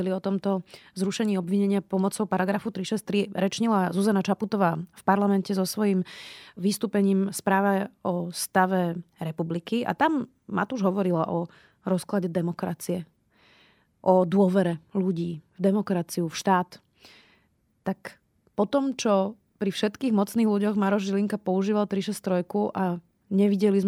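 No technical fault can be heard anywhere in this speech recording, and the signal holds steady throughout with nothing in it that calls for correction.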